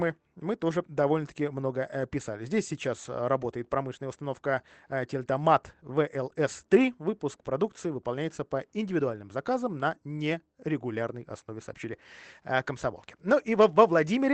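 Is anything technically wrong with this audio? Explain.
No, nothing is technically wrong.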